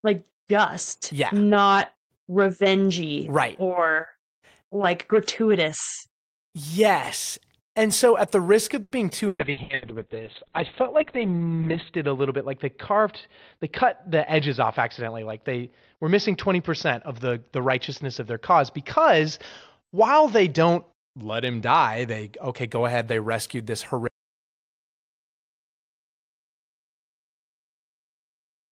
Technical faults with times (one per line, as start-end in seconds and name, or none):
8.83-9.84 repeated packet loss (robotic sound)
9.45-22.76 call bitrate drop
13.83-15.10 jitter buffer speed-up
24.08-28.72 audio dropout to silence